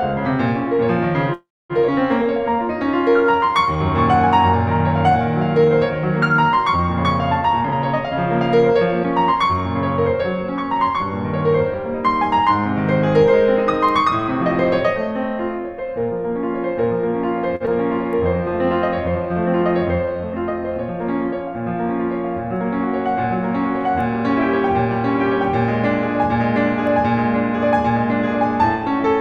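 The clip is music. Between 1.33 and 1.73 s there is a call audio freeze, most likely because packets were held up in transit and the jitter buffer ran dry. The receiver carried the last sound forward for about 361 ms: it decays into roughly 250 ms of silence, and then the music resumes exactly where it left off. Nothing is lost, but a gap has been inserted and the music now runs later than before. Skip ahead happens three times, at 1.88–1.91 s, 9.04–9.07 s and 17.66–17.70 s. Each time a stretch of audio was discarded while later audio was already queued, about a fifth of a second at the first jump and about a tenth of a second at the other two. Playback leaps forward with only a few milliseconds of fill, so the music on either side of each jump is spliced almost directly together, cutting the piece short. Jitter buffer slow-down runs from 2.22 to 9.55 s at about 97% speed, adding 193 ms, and again from 18.38 to 20.22 s at about 95%, adding 108 ms. 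Here the buffer was short of reserve and the receiver repeated single pitch periods or fragments of quiet passages to rebuild it. The pitch stays the same but the tempo drags slightly, sustained sounds are drawn out, and a faint warble can come through. Jitter buffer speed-up covers 7.61 to 8.75 s at about 108%, removing roughly a tenth of a second, and 26.34 to 29.04 s at about 101%, removing a few hundredths. In both spans the buffer held more than its target, so the receiver trimmed short pieces of one or a few pitch periods, over and over. The pitch is unchanged, but the music loses its steady pulse and, in the first span, hurries. A short stall from a late packet occurs at 17.56–17.63 s. One packet missed its playout time, the buffer emptied, and the receiver stretched the last sound by about 46 ms until the packet turned up. Nothing is missing, but that sound is held too long with a slight buzz or dip. 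It is immediately followed by the skip at 17.66 s.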